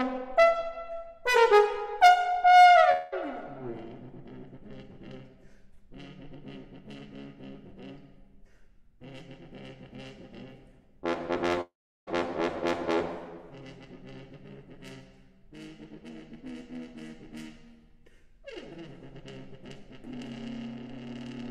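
Two long network dropouts likely cut off incoming audio. From 2.91 to 3.14 s, 200 ms is lost and bridged by a fading buzz or hiss. From 11.61 to 12.09 s, 460 ms vanishes, the fill decaying into 360 ms of silence before sound resumes further on.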